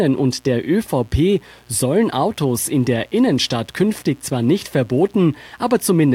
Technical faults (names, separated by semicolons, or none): mains buzz